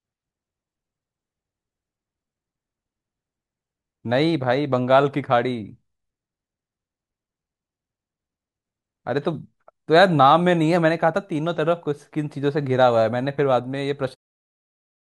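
No technical faults can be heard in the recording. Near the end, from around 14 s to 14.16 s, the level eases down in a smooth editor's fade-out with no click or hard edge.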